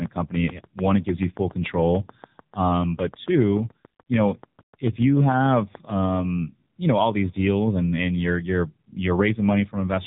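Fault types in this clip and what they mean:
AMR narrowband mobile codec: The whole clip has passed through the AMR-NB mobile speech codec, which encodes speech as a vocal-tract filter excited by a handful of pulses per subframe. Nothing above 4 kHz survives, so the speech is dull and telephone-like. Coding damage is heavy: the voice is buzzy and synthetic, which fits a low mode of around 6.7 kbps rather than a higher AMR rate.
Train of clicks: A run of near-identical clicks sits over the speech from 0.06 s to 6.2 s, ending just before "you know all these". They arrive at a regular 6.85 per second, about forty in all, peaking at about 5 dB above the speech. They tick through pauses as well as speech. The steady pace and uniform shape make interference from nearby equipment or a faulty connection or power supply the likely cause.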